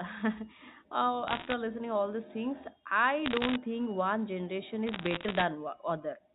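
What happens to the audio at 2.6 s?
Nothing goes wrong at 2.6 s: the speech carries straight through that moment with no dropout, click or distortion, just the narrow, telephone-band sound of G.711 coding that runs under it.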